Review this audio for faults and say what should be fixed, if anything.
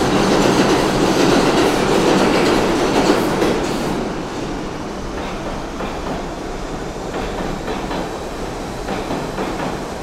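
Nothing to fix: no faults found in this audio.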